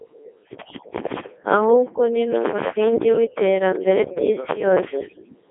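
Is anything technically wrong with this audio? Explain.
Yes. Throughout, the speech passed through a Codec 2 vocoder, likely near 3.2 kbit/s. It is rebuilt from sine waves, sounding robotic and buzzy, with nothing above 3.7 kHz.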